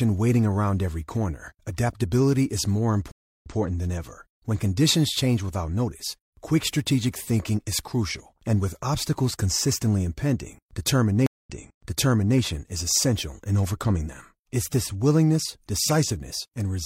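Stream reconnect at 3.12 to 3.56 s: after "corner adaptability is more" the speech cuts to about 0.3 s of silence, then picks up 0.14 s earlier than where it stopped, before "than ever." A second stream reconnect at 11.26 to 12.38 s gives 0.19 s of silence, then jumps back 0.93 s, so a stretch repeats before "is essential in overcoming." Each time the connection dropped, the player restarted its decoder mid-stream, and the server's resent burst replays audio already heard.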